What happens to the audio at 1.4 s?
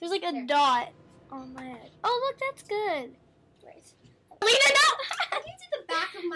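Nothing goes wrong at 1.4 s; the audio plays through that moment intact, with no dropout, click or other fault.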